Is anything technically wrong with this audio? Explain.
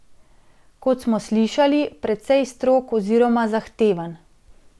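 No, nothing technically wrong turns up anywhere in this recording.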